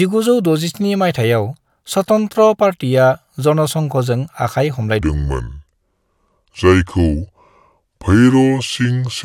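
Section at the wrong speed, 5.01 to 9.24 s: speech slows to 0.69 times, dropping about seven semitones into a deep drawl, likely from a mismatched playback clock.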